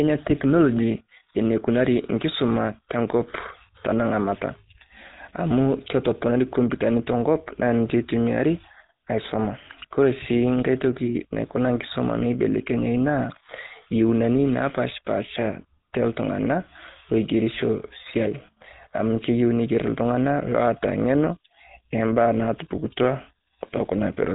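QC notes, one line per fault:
Throughout: GSM full-rate codec. The speech has a plainly audible buzzy, gravelly roughness with nothing above 3.8 kHz, which fits a 13 kbps GSM coder building the voice from sparse regular pulses. Simple narrowband filtering would sound dull but smooth, without this grainy buzz.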